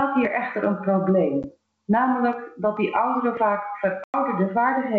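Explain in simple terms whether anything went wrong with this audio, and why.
Two things are wrong here. The first is gain pumping, and it runs through the whole clip: the level keeps getting pulled down whenever the speech gets loud, so loud and soft parts end up closer together and everything sounds squashed. The likely cause is the level set far too high, with a fast limiter grabbing it on every loud moment.

The second is packet loss on an ADPCM call. At 1.43 to 1.45 s there's a tiny hard-edged hole, about 10 ms and probably a single lost packet. At 4.04 to 4.15 s there's a bigger gap of 100 ms, roughly ten packets' worth. This kind of decoder guesses each bit of sound from the last one, so after a hole it's briefly out of step and the speech comes back a bit rough before it settles. The wideband phone coding underneath keeps the speech clear and sounds fine.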